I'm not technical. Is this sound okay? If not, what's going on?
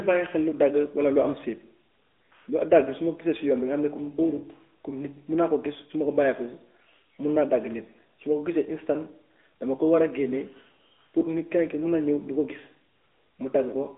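No. The AMR narrowband mobile codec runs throughout: the speech is squeezed into phone-line width, losing everything above about 3.8 kHz, and sounds noticeably buzzy and synthetic.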